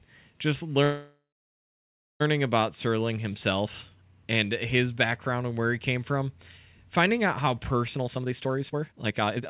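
At 0.84 s the audio stops moving forward and a call audio freeze begins. It lasts until 2.22 s. The receiver runs out of fresh audio, likely because packets were held up in transit and the jitter buffer ran dry. It stretches the last sound into a fading buzz or hiss, and about 0.95 s of that stretch is silence. When playback resumes, it picks up where it stopped. Nothing is lost, but the rest of the clip now runs about 1.36 s later.

From 7.95 s to the end, a jitter buffer speed-up takes over. Too much audio has piled up in the buffer. To catch up, the receiver cuts out many tiny pitch-period slices in quick succession, removing about a second in total. The speech plays at roughly 166% speed with its pitch unchanged, so it sounds rushed. Throughout, the band stops at 4 kHz, which fits a G.711 call codec.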